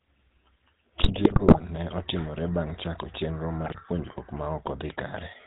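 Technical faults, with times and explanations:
Throughout, GSM full-rate codec: the speech has the buzzy, gravelly roughness of the old full-rate coder, whose damage is plainly audible. Nothing reaches above 4 kHz, and the coarse pulse excitation, sampling only every third point, grinds the voicing. This steady texture differs from the sudden, localised breakups below.
1.02 to 1.61 s and 3.66 to 3.81 s, GSM bit errors: the speech collapses into squawks, pops and gargling, first just before "ne otimore", then between "chako chenro" and "puonjruok ma". Corrupted filter, pitch and gain values, at roughly 2.6% and 1.7% error rates, warp the spectrum and level frame by frame.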